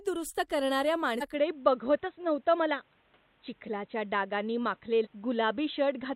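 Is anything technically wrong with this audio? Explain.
Yes. The speech has two kinds of fault.

Damaged data in a compressed stream occurs twice. The first is from 1.17 to 1.23 s, right after "दुरुस्त करणाऱ्या". The second is from 5.01 to 5.07 s. Each lasts about 55 to 60 ms. Part of the coded stream was corrupted there. The decoder could not read those frames cleanly. It lost sync and had to find the next valid frame. Each event is heard as a brief blip or chirp that breaks the speech.

An input switched to a poorer device starts at 1.34 s, also just after "दुरुस्त करणाऱ्या", and lasts to the end. The sound is likely to have moved to a lower-grade microphone or a headset's call mode. Nothing remains above 4 kHz. The speech turns dull and boxy at once. There is no gap at the change, and the level stays roughly the same. A new background noise appears, about 40 dB below the speech.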